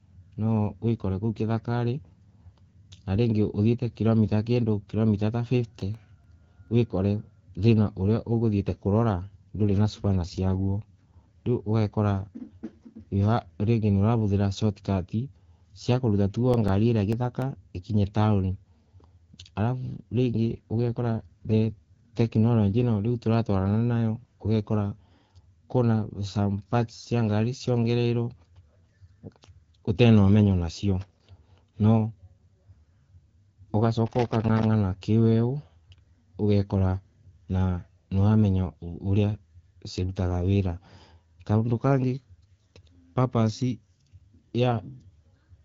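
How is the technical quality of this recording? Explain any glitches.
The recording has three kinds of glitch, all set against wideband phone-style audio whose codec character is audible as light coloration.

From 5.80 to 6.68 s there are seven sharp ticks, and from 16.39 to 17.57 s there are nine, each lasting only a few milliseconds. These are CD scratch ticks. A blemish on the disc defeats error correction once per revolution, so the player patches or mutes those samples at a steady rhythm.

From 9.16 to 11.21 s and again from 20.51 to 22.84 s, the speech turns grainier and more synthetic, with no gap and no narrowing of the band. This is an AMR rate drop. The sound fits the network stepping the codec down from 12.65 to 8.85 kbit/s so that it can spend bits on protecting a weak link.

From 31.01 to 31.29 s and from 34.06 to 34.64 s there are ragged, irregular bursts of crackle and scratching. 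This is loose connector crackle. A worn or dirty contact rapidly makes and breaks the circuit, chopping the signal into fragments.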